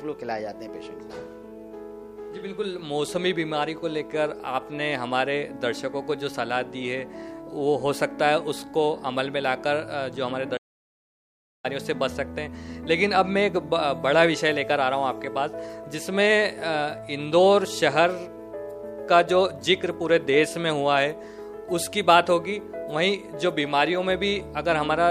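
The input was likely lost, through a disconnected device, a failed link or a stray mute, while recording kept writing silence. The audio dropout to silence runs from 10.58 to 11.64 s: the sound cuts out mid-flow, leaving a dead gap without room tone.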